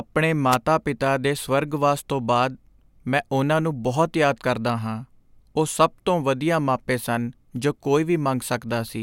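A wireless microphone noise hit occurs from 0.51 to 0.56 s, a brief burst of static lasting about 50 ms near the start of the speech. It comes from the radio link of an analogue FM microphone. Reflected copies of the transmitted signal arrive out of phase and briefly cancel the direct one. As the received signal drops, the receiver's own noise rises to the surface and sweeps across the speech as a short swish.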